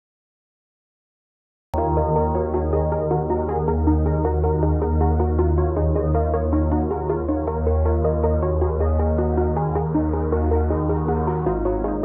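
From 0 to 1.74 s there is digital silence, and then the sound enters mid-event: a cut-off start, where capture began late. No attack or fade-in is heard. The waveform is flat until a hard vertical edge, and the spectrogram is blank before an abrupt full-band onset.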